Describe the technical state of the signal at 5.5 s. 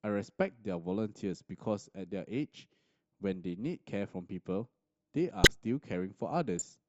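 Right around there, from 5.44 to 5.47 s, there's a corrupt frame decoded: damaged bits in roughly two compressed frames got played as-is, so misread gains and codes throw energy into the wrong frequencies, giving a short blip peaking at about -10 dBFS.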